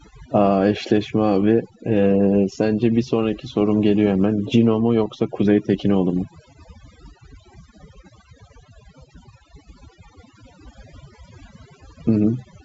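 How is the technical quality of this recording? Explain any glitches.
The recording is speech carried over G.722 wideband telephone coding at 64 kbit/s, which sounds clear up to about 7 kHz with only faint coding noise. It is marred by one fault: overdone noise removal. Throughout the clip, a noise reduction stage set far too aggressively pulls individual frequency bands down, or switches them off entirely, whenever their level sits near its noise estimate. Softer parts of the speech fall below that threshold and are cut along with the noise. The background drops and breaks up into twinkling, chirpy specks.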